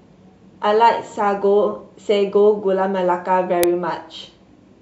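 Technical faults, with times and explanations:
3.63 s, uninitialised buffer: a single loud, harsh click of digital noise cuts into the clip for roughly 1.5 ms, which fits one 64-sample block. The playback path sent this block to the output before any audio had been written into it, so whatever values were left in that memory were played as samples. Those values have no relation to the surrounding waveform and can sit near full scale, which makes the burst sharp, broadband and much louder than the speech around it.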